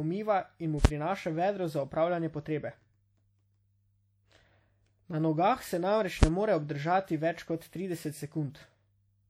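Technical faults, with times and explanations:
Throughout: WMA compression, likely the cause of the ringing, washy smear and a hiss that swells and falls with the speech. Its long transform blocks spread quantisation noise over tens of milliseconds. The plainly audible damage fits a low bitrate around 48 kbps. Unlike brief clicks, this never stops.
0.85 s and 6.23 s: invalid numbers at full scale. A calculation produced invalid values, so the output was pinned at one extreme for about 5.8 ms, which fits a 256-sample block. The block is so short that each event is a single loud bang, not two pops around a silence.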